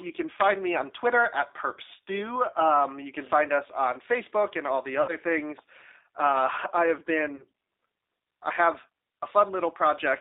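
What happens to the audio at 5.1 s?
From 5.02 to 5.16 s there is VoIP packet loss concealed by the speech codec. About 60 ms of audio went missing, which fits two lost 30 ms packets. The decoder filled the hole by repeating its last pitch and vocal-tract filter at falling gain. The speech smears into a short buzzy tone or coloured noise that fades instead of breaking off. A plain dropout would leave silence or a click. The concealed sound is followed by a weak or distorted recovery for tens of milliseconds or more after the packets resume, because each decoded frame builds on the damaged one before it.

Underneath, the whole clip carries the G.729 codec at 8 kbit/s. Its line band runs from about 300 Hz to 3.7 kHz, and the codec damage is plainly audible. The speech is rebuilt from pulses and a filter, so it sounds rough and synthetic. That sets it apart from a simple telephone band-limit, which would sound muffled but clean.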